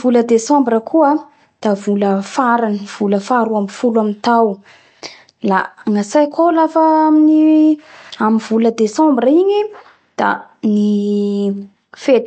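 From start to finish the speech has no content above 8.3 kHz, and s sounds turn watery and swirly as faint detail flickers in and out, likely from MP3 compression at a bitrate near 48 kbps. Unlike a simple low-pass filter, the remaining band also warbles and smears.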